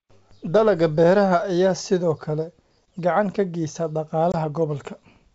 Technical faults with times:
4.32-4.36 packet loss on an ADPCM call

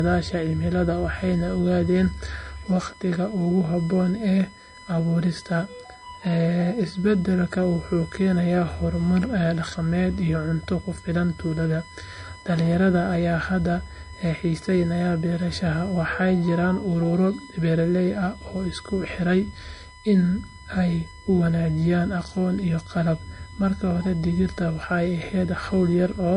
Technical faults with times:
0.00-26.36 USB whine
0.00-26.36 low-bitrate audio saved at a high bitrate

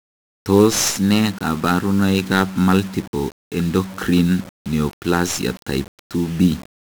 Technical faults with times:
0.00-6.92 1-bit DFPWM compression

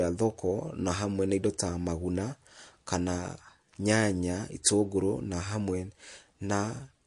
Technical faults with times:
0.00-7.07 MP3 compression

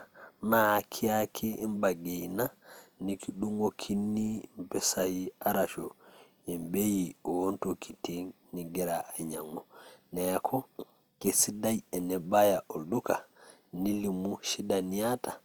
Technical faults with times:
0.00-15.45 low-bitrate audio saved at a high bitrate

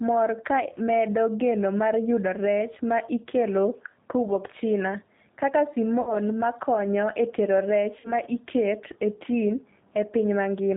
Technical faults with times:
0.00-10.76 G.729 codec
6.01-6.16 VoIP packet loss concealed by the speech codec
8.00-8.13 VoIP packet loss concealed by the speech codec

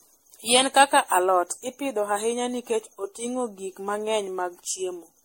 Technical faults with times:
0.00-5.24 generation loss

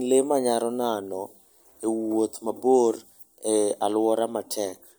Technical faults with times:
none

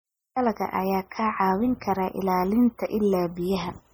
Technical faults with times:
0.00-3.93 MP3 compression

